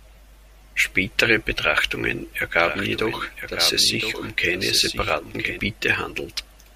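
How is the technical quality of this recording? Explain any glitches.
From 2.55 to 5.59 s the speech has a doubled audio track: a full-band copy roughly a second late and about 10 dB quieter, with no decay. It starts and stops abruptly, likely from a second, slower capture path.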